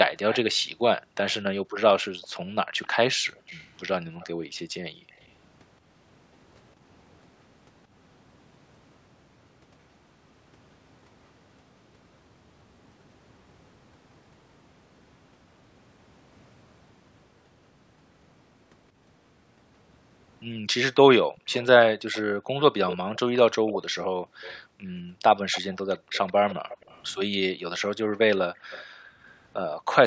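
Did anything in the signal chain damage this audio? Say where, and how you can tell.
Yes. A faint copy of the speech trails the original by 170 ms from 0.31 to 5.27 s, from 21.48 to 27.03 s (noticeably louder there), and from 28.16 to 29.76 s. This echo leak likely comes from call processing, where a loudspeaker-side echo canceller let part of the returned signal through.

The room background also collapses, by as much as about 40 dB, between 0.54 and 5.12 s, at 21.28 to 21.48 s, between 24.17 and 26.13 s, and between 28.53 and 29.95 s. This is background gated by the echo canceller, which clamped the microphone hard while far-end audio played.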